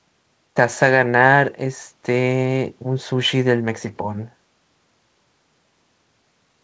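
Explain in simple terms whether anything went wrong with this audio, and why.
Nothing went wrong with this speech recording. It came through a WebRTC call path using the G.722 codec, which works as intended here and leaves nothing above 8 kHz, so the very highest, airiest sounds are missing, just as on a normal internet call.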